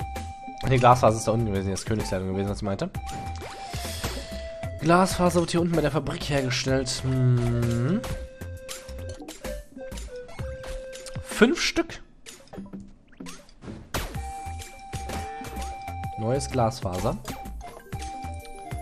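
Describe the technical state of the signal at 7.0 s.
At 7.0 s, as through the whole clip, you're hearing MP2 compression, likely at a low rate around 80 kbps: dull, gurgly, with upper sub-bands flickering out and coarse quantisation.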